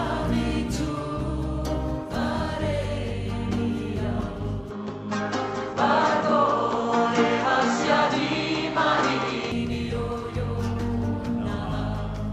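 From 4.71 s to 9.52 s the sound abruptly turns duller and boxier, with nothing above 7.7 kHz, a level shift of roughly 5 dB and a faint new background noise well beneath the signal. The cause is likely an input switched to a poorer device. There is no gap at either switch. The band, level and noise floor all change together and then snap back at 9.52 s, which separates this from a simple low-pass filter or EQ change.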